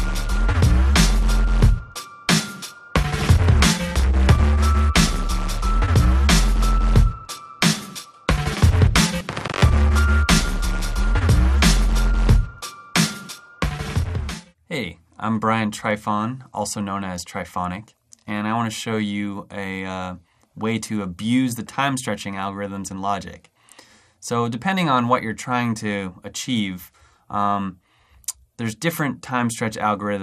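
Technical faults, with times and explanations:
Throughout: MP2 compression. The audio is dull, with a gurgling, granular roughness and upper bands flickering in and out, plainly audible and likely from MPEG Layer II at a low rate, which fits 80 kbps. Unlike MP3 swirl, the damage sits in fixed sub-band steps.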